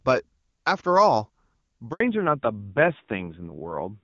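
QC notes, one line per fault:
1.92–2.00 s, handover gap: the call switched networks and no speech frames arrived for 80 ms, so the speech cuts off into silence until the new link starts.
2.00 s to end, fallback to narrowband: after the handover the clear HD Voice link fell back to a low-rate narrowband codec, so nothing above 4 kHz remains and speech sounds dull and rough.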